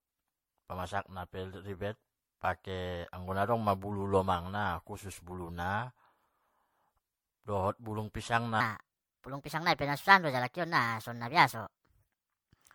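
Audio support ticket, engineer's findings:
Generation loss, full clip: swirly, hollow, smeared speech with blurred onsets. Spectrogram shows patchy holes. This likely comes from about seven MP3 re-encodes at roughly 65 kbit/s.

Section at the wrong speed, 8.60 s to end: speech turns high and hurried, running at 1.31x and about five semitones up. Harmonics sit higher on the spectrogram, and the waveform looks time-compressed. This is likely a clock mismatch.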